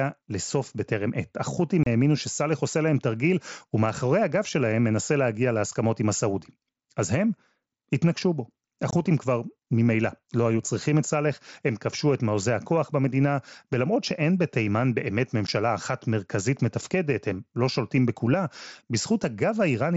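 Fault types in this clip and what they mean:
Unconcealed Bluetooth headset packet loss: The speech drops out abruptly three times, leaving short silent holes with hard edges, about 30 ms at 1.83 s, 22 ms at 8.91 s, and 15 ms at 15.47 s. Several consecutive voice packets between headset and phone went missing, consistent with frames of about 7.5 ms. Nothing filled or smoothed over the gaps, so the sound simply stops and restarts within the 8 kHz band of the mSBC link.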